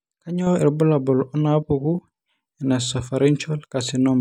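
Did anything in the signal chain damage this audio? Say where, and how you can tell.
Yes. At 0.47 s the speech and its background noise step up together by about 6 dB and stay there to the end. That is a sudden gain jump. The likely cause is a digital gain change applied in one sample, with no ramp.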